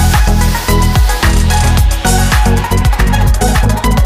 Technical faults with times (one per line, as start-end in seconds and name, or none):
2.52-4.05 time-stretched section